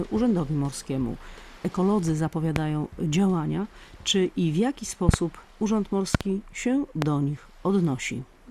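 Loud pops strike at 2.56–2.59 s, as a doubled pop at 5.09–5.16 s and again at 6.15–6.23 s, then singly at 7.02–7.05 s. Each peaks about 20 dB above the sound, which carries on underneath unbroken, unlike a dropout. Each is likely a sudden voltage pulse, from a plug, switch, static or driver glitch, shaped into a thump rather than a fine, dense crackle.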